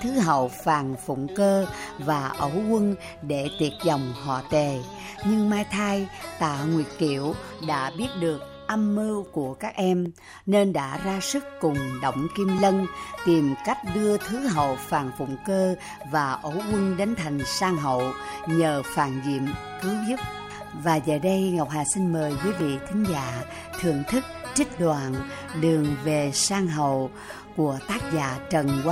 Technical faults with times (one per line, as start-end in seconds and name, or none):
10.06 block of digital silence
12.58 block of digital silence
22.60 block of digital silence